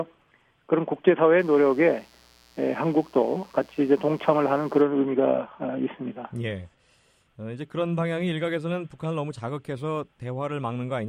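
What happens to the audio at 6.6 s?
Nothing goes wrong at 6.6 s; the audio runs through that moment intact, with no dropout, click, glitch or other fault.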